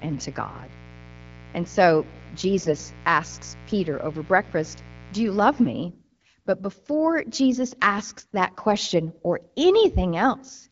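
From the start to 5.70 s a mains buzz sits under the speech, roughly 20 dB below it. Sharp switching spikes on a 60 Hz supply stack up harmonics into the kilohertz range, so it rasps rather than hums.

AMR bit errors hit at 2.58 to 2.76 s, 5.88 to 6.27 s, and 8.18 to 8.33 s, just before "that question or". Flipped low-priority bits misplace the excitation pulses and skew fine pitch and gain, so pitch and level hold but turn hoarse and gargly. Packet loss would drop or smear the sound instead. Around them the wideband codec sounds clear, consistent with a rate near 12.65 kbit/s.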